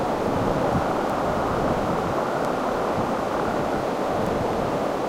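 A recording of everyday sounds carries three bit error spikes, single sharp broadband ticks at 1.10, 2.45 and 4.27 s, each peaking around -15 dBFS. The tick at 2.45 s is marginally fuller, consistent with a short run of flipped samples rather than one. A flipped bit in storage or transfer causes these jumps, unrelated to the sound itself.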